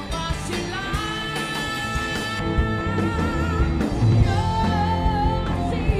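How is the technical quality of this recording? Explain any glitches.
The recording has one clear fault. From 2.39 s to the end, de-emphasis is applied wrongly: a treble cut intended to reverse pre-emphasis acts on audio that never had it or is applied twice, so the response falls smoothly to about 11 dB down at 10 kHz relative to 1 kHz. The sound turns dull and muffled.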